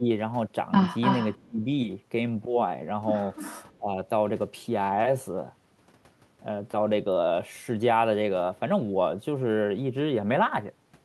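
At 0.00 to 0.05 s the speech dips by roughly 15 dB, and it does so again at 1.41 to 1.66 s, where the drop reaches roughly 25 dB over about 200 ms, and at 3.78 to 3.96 s, roughly 15 dB across about 150 ms. This is speech suppressed in double talk, likely from an echo canceller that could not tell the local talker from returning loudspeaker sound while both sides were active, so it turned everything down. Unlike an echo problem, nothing extra is added; the voice itself sinks. Echo leak appears at 1.01 to 1.43 s as a second copy of the voice trailing 291 ms behind, only about 5 dB below the speech, and again at 3.36 to 3.65 s with the same 291 ms delay but far fainter, around 20 dB down. The fixed lag and the added, ghostly repeat are what separate it from suppression: here sound is returned rather than removed.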